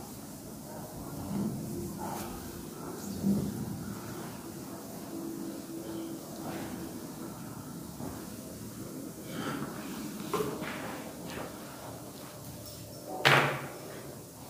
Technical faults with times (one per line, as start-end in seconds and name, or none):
none